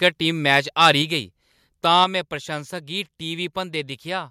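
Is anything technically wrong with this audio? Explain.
Yes. The recording has two kinds of fault, and each happens twice.

Microphone overload occurs from 0.52 to 0.91 s and again from 1.95 to 2.04 s. The peaks are flattened at the top, harsh and crackly, with the first pass about 4 dB over the limit and the second about 1 dB. The likely cause is input gain set so high that the loudest peaks hit the converter's ceiling. Only a small share of samples is cut, around one or two percent. That is why the distortion sits on the loudest moments as a gritty edge, unlike codec or network damage, which smears or drops whole stretches.

Microphone volume stepped down at 1.02 s and at 2.04 s. The whole level drops abruptly, by about 3 dB and then about 4 dB, and the background drops with it. The likely cause is the call software lowering the device's input volume in one step after detecting the overload. 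Each drop follows a distorted peak, and the second comes right at its end. A compressor or automatic gain control would ease the level down gradually, but here the level drops in one step and stays at the new, lower setting.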